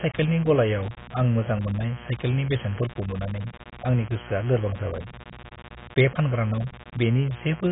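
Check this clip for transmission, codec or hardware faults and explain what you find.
Two faults run through the whole clip: a mains buzz and heavy codec damage.

The mains buzz sits under the speech from start to finish, at roughly 20 dB below it. Sharp switching spikes, probably from a dimmer, a rectifier or a missing shield, repeat twice per 60 Hz cycle, so the harmonics stack up into the kilohertz range. That gives the steady, raspy buzz you hear.

The codec damage is heavy, and the likely cause is AAC-LC at a very low bitrate, something like 16 kbps. At that rate the encoder can't afford the top band, so nothing survives above 3.8 kHz and the spectrum gets gappy. The speech comes out dull and smeared, with a warbly, fizzy edge on sustained sounds and sibilants.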